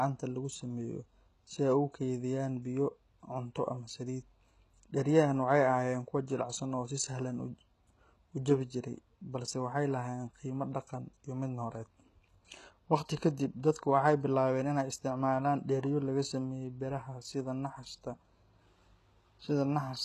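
A speech recording that has most likely passed through HE-AAC compression at a very low bitrate, on the order of 16 kbps, for its whole length. The codec spends its few bits on the lower spectrum and fills in the treble by copying lower bands upward under a coarse envelope, so the top sounds bright but synthetic, with harmonics that don't line up above the crossover. S sounds come out gritty and metallic, the damage is plainly audible throughout, and nothing reaches above about 12.4 kHz.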